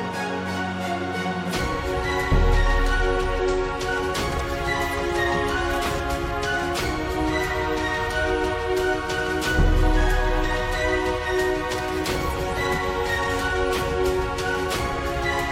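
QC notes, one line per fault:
1.49–1.54 s, 3.39 s, 5.99 s and 10.41–10.46 s: damaged data in a compressed stream. Corrupt bytes make the decoder misread frames and lose sync while it hunts for the next valid header, so the sound breaks into brief chirps or blips of up to about 50 ms.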